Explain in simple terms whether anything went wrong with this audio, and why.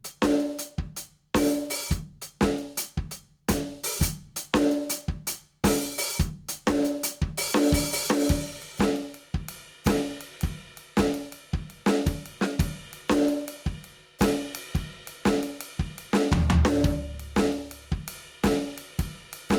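Gain pumping runs through the whole piece of music: the level keeps getting pulled down on each loud moment. That is likely from the level being set far too high, so a fast limiter kept yanking it down, leaving the sound squashed and breathing.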